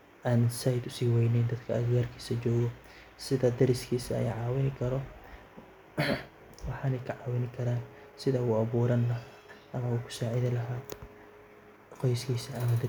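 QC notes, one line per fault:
No faults heard across the recording.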